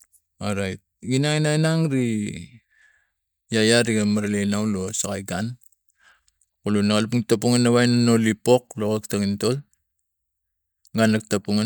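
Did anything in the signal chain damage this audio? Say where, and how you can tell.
No, nothing in the signal chain has damaged this audio. None of the stages from capture through to playback leaves an audible mark on this speech recording.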